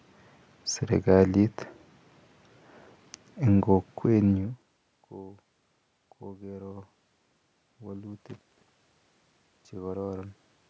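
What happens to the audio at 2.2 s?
Nothing goes wrong at 2.2 s: the speech there is intact, with only the background noise of the room under it.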